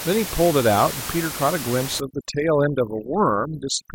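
Overdone noise removal sets in at 2.0 s in this speech clip and runs to the end. The suppression pushes frequency bands near the room noise, which sits only about 10 dB below the speech, far down, so the background collapses into twinkling specks.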